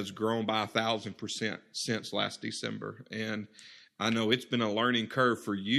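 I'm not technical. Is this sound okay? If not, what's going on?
Yes, it's fine: nothing in this recording sounds broken or out of place, so there's nothing to worry about.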